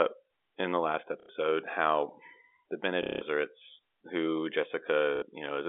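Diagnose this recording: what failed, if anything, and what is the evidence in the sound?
Network stage: packet loss with last packet repeated. Short robotic stutters occur at 1.2 s (90 ms, between "in the last" and "how the"), 3.03 s (180 ms) and 5.16 s (60 ms). The receiver replayed old packets, which fits 30 ms packets.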